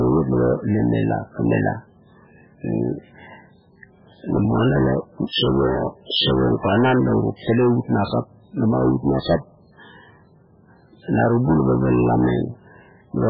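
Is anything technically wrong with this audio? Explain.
Yes. The speech carries heavy MP3 compression throughout. The encoder is likely starved of bits, which fits a very low rate around 8 kbps, so it discards the treble and drops weak frequency lines that flicker on and off between frames. The result sounds watery and swirly, with smeared consonant onsets and metallic chirps on s sounds. On a spectrogram, energy stops at a hard ceiling near 5.2 kHz, and the band beneath it looks patchy and blocky.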